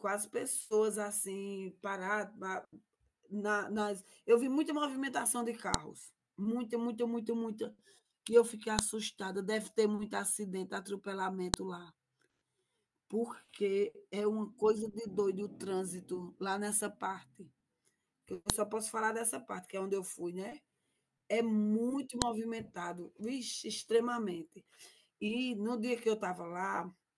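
Sharp clicks at 5.74, 8.79, 11.54, 18.50 and 22.22 s are a file header played as audio. Joined WAV pieces kept their header bytes, which show as abrupt waveform spikes and thin vertical broadband lines on a spectrogram.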